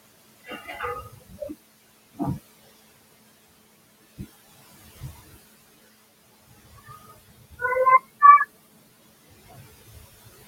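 From start to finish you get noise suppressor artifacts: the suppressor is pulling what it judges to be steady noise down by about 16 dB, band by band, so the room noise, about 18 dB under the speech, dips in the gaps and swells underneath.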